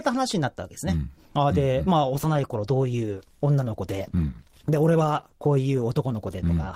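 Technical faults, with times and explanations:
2.05 s to the end, adaptive stream at a lower bitrate: the speech suddenly picks up more codec artefacts, with no gap at the switch. That sounds like the player dropping to a lower rung when the connection slowed, which fits a step from about 64 down to 16 kbit/s Opus.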